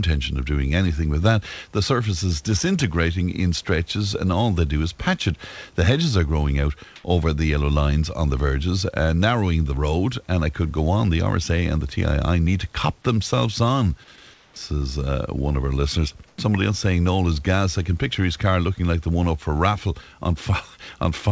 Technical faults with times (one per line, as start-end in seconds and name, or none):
6.96-7.04 comfort noise in place of the background
14.34-14.56 comfort noise in place of the background
16.28-16.38 comfort noise in place of the background